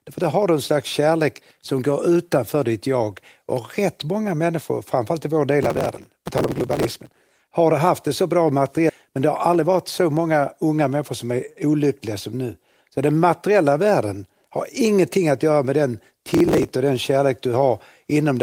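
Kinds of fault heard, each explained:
Processor overload crackle: from 5.63 to 7.47 s, after "människor framförallt i vår" and up to "har haft det så", and again from 16.29 to 16.75 s, the processor misses buffer deadlines of about 1.5 ms in quick succession. Each missed buffer is skipped, and the tiny hard-edged gaps pile up into a gritty crackle.
Skip ahead: at 8.89 s, right after "haft det så bra", playback jumps forward with no gap filled. Around 400 ms of speech that was already waiting is discarded, probably by an overfull jitter buffer, so the speech on either side of the cut is butted together.
Jitter buffer speed-up: from 9.09 to 10.19 s, leading into "unga människor som är", the receiver trims short pitch-period slices again and again to shrink an oversized buffer. Speech runs about 7% fast at unchanged pitch, losing roughly 70 ms, and sounds hurried.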